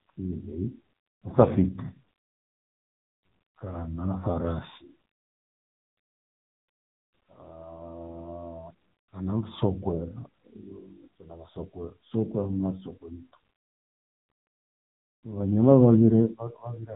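From start to finish the speech runs through AMR narrowband mobile codec compression at a low 6.7 kbps, so nothing gets above 3.8 kHz and voices come out heavily buzzy and synthetic.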